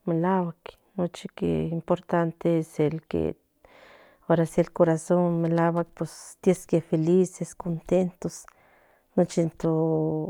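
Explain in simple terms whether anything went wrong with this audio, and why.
Nothing went wrong: no technical fault is audible anywhere in the recording.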